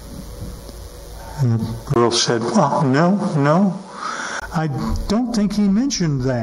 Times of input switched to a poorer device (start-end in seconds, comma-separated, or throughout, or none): 1.94-4.42